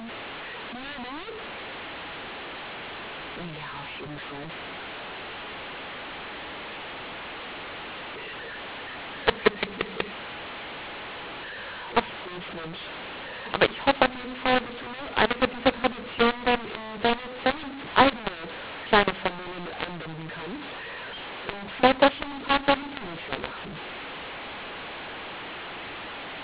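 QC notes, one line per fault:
Throughout: mu-law and A-law mixed up. The speech was coded as A-law G.711 but decoded with the mu-law curve, so each 8-bit code maps to the wrong amplitude on a mismatched logarithmic scale. Some levels come out too loud and others too soft. The quietest codes decode well above zero, so pauses fill with hiss and the speech turns harsh and gritty. The band stops at 4 kHz, which fits 8 kHz telephone coding.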